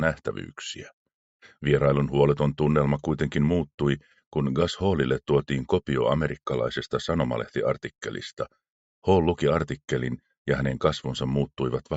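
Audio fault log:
No fault can be heard in the audio. It comes through a call's microphone processing and a WebRTC call path, and its content stops at 8 kHz, as that call link allows.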